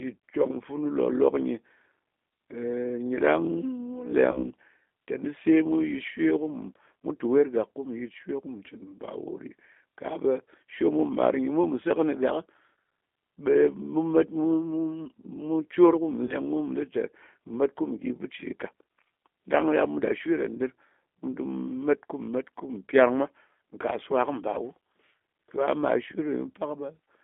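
Throughout, the speech carries G.729 codec damage: plainly rough, synthetic texture, with the spectrogram confined to a band of about 250 Hz to 3.5 kHz, which fits an 8 kbit/s G.729A stream.

At 4.32 to 4.49 s and again at 16.25 to 16.36 s, VoIP packet loss concealed by the speech codec appears. The decoder repeated its last pitch and filter, producing a fading smear and then weak recovery. On the spectrogram this shows as flattened harmonics. The gaps fit one and two lost 20 ms packets.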